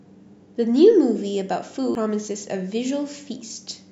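At 1.95 s the speech suffers a CD skip: the laser lost its track and landed on a different turn of the disc's spiral, so the player muted for a few milliseconds and resumed from another point in the recording. It sounds like a brief tick followed by an abrupt jump in the speech. A waveform shows a tiny flat gap with a mismatched edge on either side, and a spectrogram shows a thin vertical broadband stripe.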